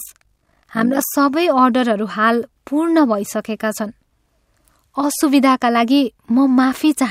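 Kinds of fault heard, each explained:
Overlap-add ripple: the speech was split into windowed frames and rejoined with an overlap whose gains don't add up evenly, so the level pumps once per frame. From 0.0 to 1.07 s this gives a rough flutter at around 50 Hz, swinging about 11 dB. A waveform shows a regular scalloped envelope, and a spectrogram shows evenly spaced vertical bands of energy striping every frequency at that rate.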